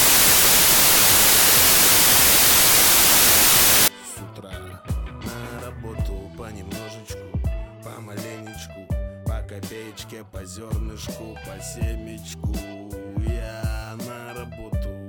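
From 0 to 3.88 s there is a wrong sample width fault: packed 24-bit samples read as 32-bit, so bytes straddle sample boundaries. Loud noise buries the original, which runs 1.33 times fast and high-pitched. The waveform looks dense, the spectrogram a broadband wash.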